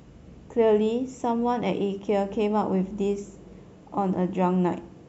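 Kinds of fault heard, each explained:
No technical faults can be heard in this speech.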